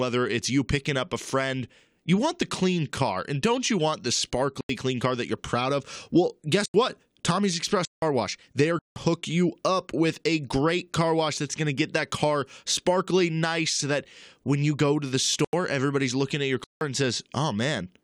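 Blocks of digital silence cut the speech at 4.61 s (after "don't you want the"), 6.66, 7.85, 8.79, 15.45 and 16.64 s. Each hole is about 85 or 171 ms, which fits 4096- and 8192-sample buffers left unfilled. Unlike a faded dropout, each cuts out and back in with no fade.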